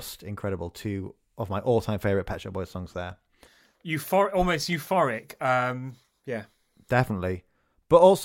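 Dropped samples at 3.10 s and again at 4.73 s put two isolated sharp clicks into this speech recording. Each is most likely a fraction of a millisecond of missing audio: the stream skips ahead, so the waveform jumps straight from one value to a later one instead of moving smoothly between them. That gap is far too brief to take away any of the sound. It is heard only as a single click, a thin vertical line across the spectrum.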